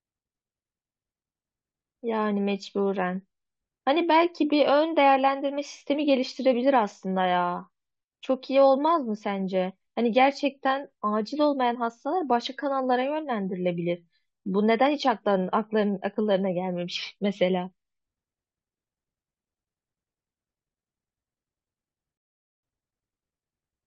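At 22.17 s the speech halts in a rebuffering stall: playback ran dry of downloaded audio and waited about 0.46 s, resuming at 22.63 s exactly where it left off. A waveform shows a flat gap; a spectrogram shows a blank vertical band.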